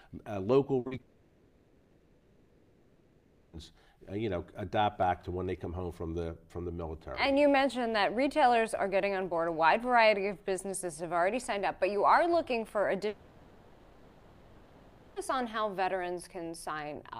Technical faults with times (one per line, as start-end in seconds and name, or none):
0.79-0.87 burst of packet loss
0.87-1.01 short concealed packet loss
1.01-3.58 long network dropout
13.08-15.18 long network dropout